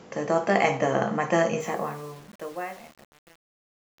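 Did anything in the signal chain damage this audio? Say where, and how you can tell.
Yes. From about 1.60 s to the end at 4.0 s, the speech fading out grows gritty as it gets quieter. This is truncation distortion on a fade: a gain or sample-format stage keeps too few bits, consistent with an 8-bit word length, and adds no dither. As the fade approaches the smallest step, the waveform collapses into coarse square steps.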